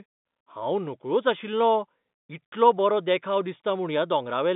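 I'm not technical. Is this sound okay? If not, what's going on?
Yes, nothing in this speech stood out as a problem on listening.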